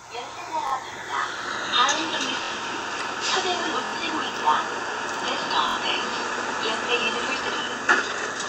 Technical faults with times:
0.67-0.72 repeated buffer
2.44-2.51 repeated buffer
3.85-3.92 repeated buffer
5.69-5.76 repeated buffer
7.04-7.06 repeated buffer

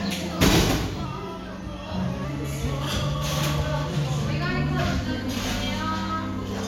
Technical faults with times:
1.05-2.24 drift correction step

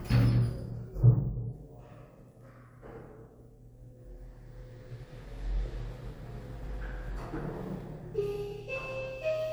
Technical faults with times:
none

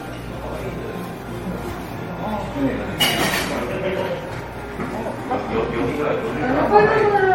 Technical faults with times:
0.00-7.34 generation loss

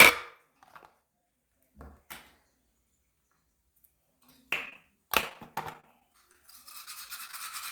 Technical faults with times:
4.65-4.84 repeated packet loss (robotic sound)
5.21-7.34 repeated packet loss (robotic sound)

